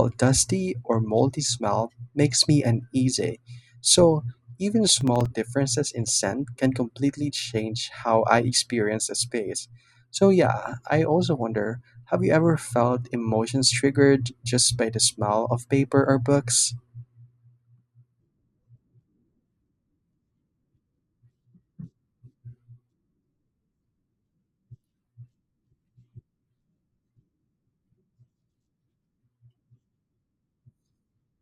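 From 5.01 to 5.26 s, just before "differences in scent can", the speech picks up a short burst of processor overload crackle. The processor repeatedly missed its deadlines for very small buffers of a few milliseconds each, and a handful of them went out empty, so the sound drops to silence for brief moments with hard edges on either side. On a waveform this shows as the signal cut to near-flat lines in several places. On a spectrogram each cut leaves a thin vertical broadband streak, and the grit stops once the load passes.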